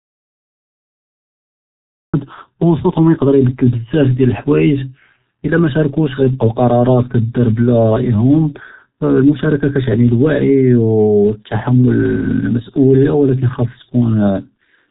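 The clip opens in complete silence, an audio dropout to silence already under way at the start and lasting until 2.1 s. There is no room tone at all. The input was likely lost, so only silence was written. Then the sound cuts in mid-flow.

From start to end, the speech carries G.723.1 codec damage. Nothing above 3.8 kHz survives. The speech sounds muffled and hoarse, and consonants blur. The heavy smearing fits a very low bitrate, around 6 kbit/s.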